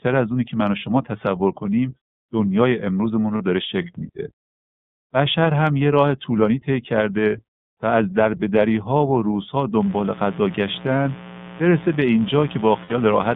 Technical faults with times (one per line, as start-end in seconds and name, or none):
0.00-13.35 iLBC codec
3.36-3.40 lost iLBC frames
9.79-13.35 mains buzz
12.84-12.92 lost iLBC frames